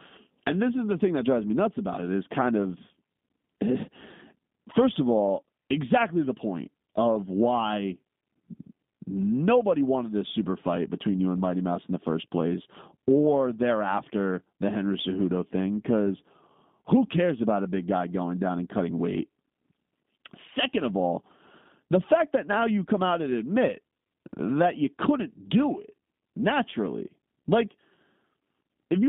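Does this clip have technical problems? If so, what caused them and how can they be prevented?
Yes. Throughout the speech there is G.729 codec damage: the sound is confined to roughly 150 Hz to 3.6 kHz and has a rough, slightly synthetic texture, which fits an 8 kbit/s G.729A link. The codec models the vocal tract and pitch, then approximates each 10 ms frame with a few pulses, so detail is lost. A plain telephone band filter would narrow the sound the same way but leave it smooth, without this synthetic roughness. To prevent it, carry the call over a wideband codec such as Opus or G.722 instead of G.729.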